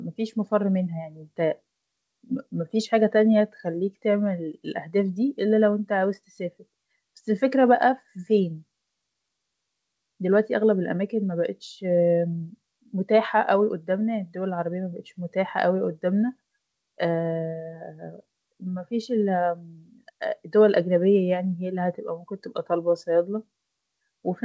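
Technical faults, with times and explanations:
Nothing stood out on listening to this speech.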